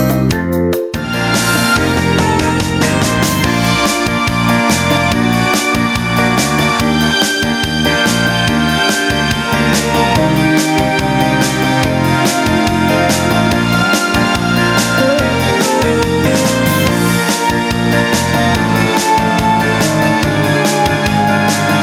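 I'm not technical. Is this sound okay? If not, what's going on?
No. Gain pumping runs through the whole clip: the level was likely set far too high, so a limiter keeps pulling it down on each loud sound, squashing loud and soft parts closer together.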